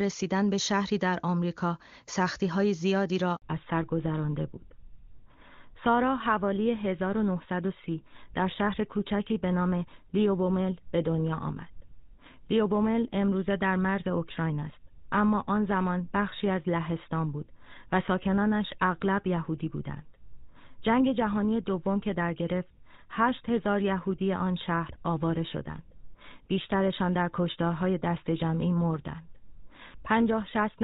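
At 3.36 s the call is handed from one network to another, and no speech frames arrive during the switch. The sound dies away within a few tens of milliseconds and stays silent for 60 ms, until the new link starts at 3.42 s. Whatever was said in that gap is lost.

From 3.42 s to the end, the call falls back to narrowband. After the handover, HD Voice gives way to an older codec, probably GSM full rate. Everything above 4 kHz disappears, so the speech turns duller and rougher than the clean AMR-WB opening.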